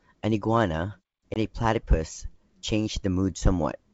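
At 1.34 s the speech drops into a hard-edged hole that lasts 20 ms, to about 1.38 s. That's packet loss on an ADPCM call, with about one packet's worth missing and filled with silence. The decoder's adaptive predictor and step size have drifted away from the sender's by the time audio resumes, so the speech comes back with a touch of distortion. It pulls itself back into line within a few tens of milliseconds.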